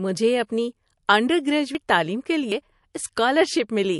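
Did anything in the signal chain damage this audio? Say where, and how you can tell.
Yes. The codec stage has damaged it throughout, likely from MP3 compression. The codec damage is plainly audible: a watery, swirly texture with smeared consonant attacks, which fits a starved bitrate in the region of 54 kbps.

At the driver or buffer stage there are three gaps, likely from dropped buffers (overrun), at 0.77 s, 1.75 s and 2.52 s. Each is a point where the sound jumps ahead with no silence, losing around 40 ms at the first and third and around a tenth of a second at the second.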